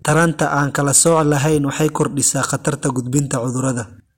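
Throughout the speech, the loudest moments break into a brittle crackle, a rasp riding on each peak. This is hard clipping: the signal was pushed about 7 dB past what a stage could pass, so a small fraction of samples, under one percent, had their tops sliced flat, adding high harmonics.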